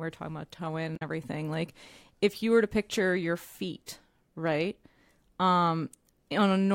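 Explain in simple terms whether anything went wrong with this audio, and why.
Right after "talking about toe in", from 0.96 to 1.02 s, a brief glitch marks damaged data in a compressed stream: the decoder lost sync.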